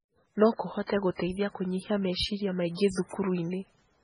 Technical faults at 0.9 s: MP3 compression; pre-echo

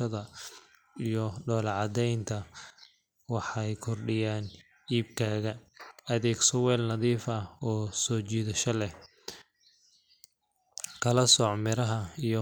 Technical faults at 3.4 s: none

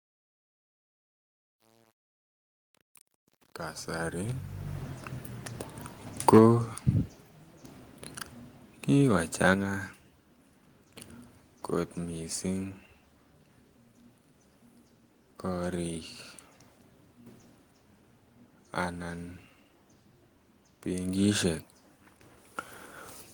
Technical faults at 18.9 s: none

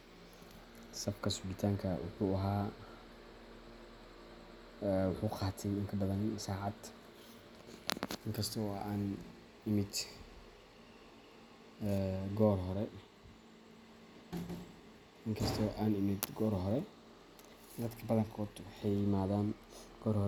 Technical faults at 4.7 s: none

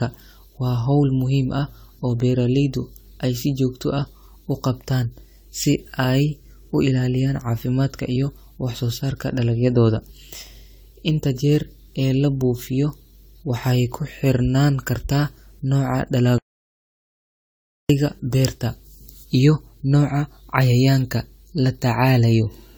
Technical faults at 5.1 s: generation loss

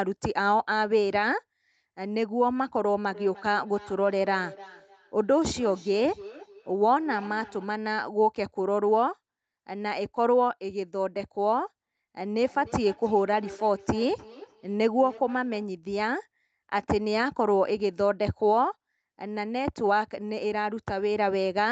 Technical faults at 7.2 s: feedback echo between two devices

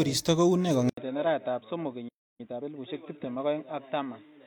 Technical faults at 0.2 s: none

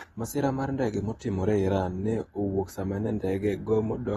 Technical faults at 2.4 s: AAC compression

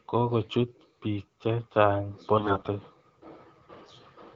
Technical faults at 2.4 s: AMR bit errors

